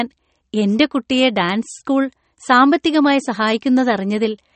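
From start to finish the speech has a plainly audible watery, swirling quality, and nothing is present above 8.4 kHz. The likely cause is MP3 compression at a low bitrate, which fits a rate of around 35 kbps. With so few bits, the encoder discards weaker frequency components that flicker in and out from frame to frame, producing the swirl, and it removes the top of the spectrum outright, producing the cut-off.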